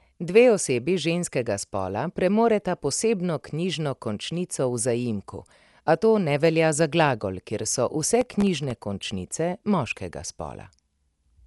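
From start to end, the speech sounds dull and band-limited. Nothing reaches above 11.5 kHz. Tones carry a rough, fluttering haze. This is likely Dolby Digital compression, fitting a 64 kbps stream, with many lines coded as dither noise.

From 8.21 to 8.81 s, processor overload crackle breaks in. The processor misses around twenty buffer deadlines, each buffer under a millisecond long. Each miss drops to silence with hard edges. Together they give a gritty crackle riding on the speech.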